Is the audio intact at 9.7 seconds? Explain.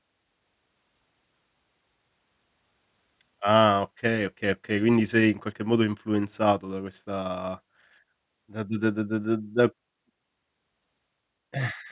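Yes, at 9.7 seconds the speech plays through cleanly with no dropout, click, distortion or other fault.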